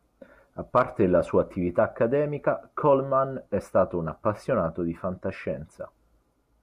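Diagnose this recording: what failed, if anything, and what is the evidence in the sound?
The fault is in the broadcast reception and codec stage: DAB burbling at 0.82 s, just before "la sua attività", a few short watery blips over the speech. Weak reception let a small residue of bit errors past error correction, corrupting MP2 samples so individual sub-bands got short blips of noise.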